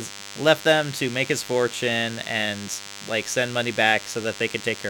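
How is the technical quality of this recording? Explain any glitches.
A thin, steady buzz sits under the speech for the whole clip, about 15 dB below it, so quality is compromised. This is DECT cordless phone buzz: a nearby handset or base emits radio bursts 100 times a second, which the audio circuitry rectifies into a harmonic-rich 100 Hz drone.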